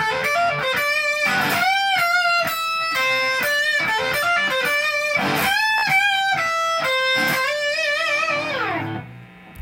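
At 5.78 to 5.83 s, a Bluetooth stutter: packets arrived late or were lost, so the receiver replayed its last buffer until data returned. The 43.5 ms gap fits a few dropped packets and sounds like a brief buzzing repeat before the audio jumps ahead.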